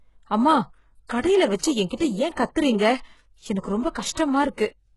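The speech is heavily coded throughout, likely by HE-AAC compression at a very low bitrate near 12 kbps. Nothing sounds above 11.4 kHz, and the rebuilt treble makes s sounds gritty and metallic. Pre-echo appears at 1.57, 1.88, 2.35 and 4.14 s. Codec noise leaks ahead of sharp attacks as a brief hiss lasting 55, 26, 26 and 33 ms, which softens each onset.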